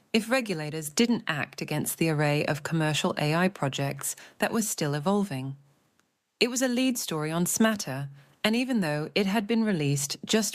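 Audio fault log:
No fault heard.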